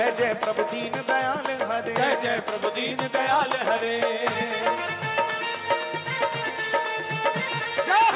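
No audible faults found; the audio needs no correction.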